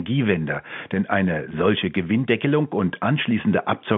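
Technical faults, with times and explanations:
No technical faults can be heard, the speech simply carrying the narrow 150 Hz to 3.5 kHz band of its G.711 telephone coding.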